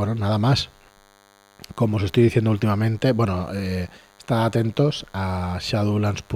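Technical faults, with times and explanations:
Throughout, DECT cordless phone buzz: a nearby DECT handset or base sends radio bursts 100 times a second. The audio circuit rectifies them. This leaves a thin 100 Hz buzz, rich in harmonics, well below the speech.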